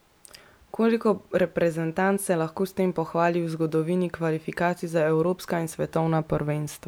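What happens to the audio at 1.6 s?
Nothing goes wrong at 1.6 s; the speech carries on intact through that moment with no break, click or distortion.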